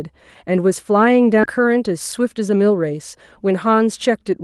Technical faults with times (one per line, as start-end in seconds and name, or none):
1.43-1.58 skip ahead
2.17-2.71 jitter buffer speed-up